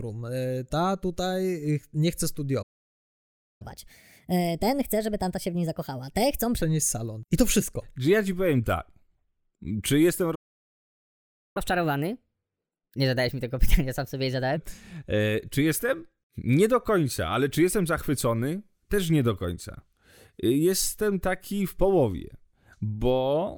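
At 2.62 s the speech halts in a playback stall, likely from the player running out of buffered data. It leaves about 0.98 s of flat-line silence, a blank vertical gap on the spectrogram. A second stall at 10.35 s lasts 1.2 s. After each stall, from 3.62 to 6.62 s and from 11.57 to 14.57 s, catch-up at higher speed plays the backlog 1.25 times fast. Pitch rises about four semitones, so the harmonics sit visibly higher and the syllables look compressed on the waveform before both drop back to normal.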